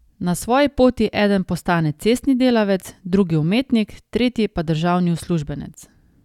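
No technical faults can be heard anywhere in this speech recording. There is nothing in the audio that needs a timestamp or a description.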